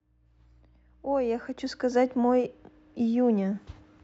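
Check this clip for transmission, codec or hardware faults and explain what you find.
I hear no faults anywhere in this speech clip.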